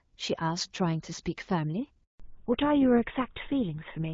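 At 2.04 s the speech cuts out in a handover gap lasting 160 ms, to 2.20 s. The call switched networks and no speech frames arrived during the switch. The sound fades within a few tens of milliseconds. Whatever was said then is lost.

From 2.20 s to the end, there is a fallback to narrowband. Before the gap, the sound has the fuller HD Voice band, with light AMR-WB coding that fits about 12.65 kbit/s. Afterwards nothing reaches above 4 kHz. The speech sounds duller and rougher, which points to GSM full rate.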